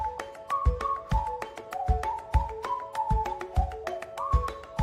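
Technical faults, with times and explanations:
No technical faults detected anywhere in the recording.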